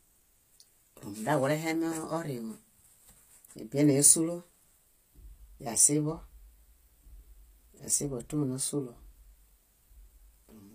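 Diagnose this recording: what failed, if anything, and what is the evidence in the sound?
The codec stage: sibilants sound gritty and metallic throughout, with nothing above 15.5 kHz, likely HE-AAC compression at a low bitrate, around 24 kbps, with its replicated treble misaligned.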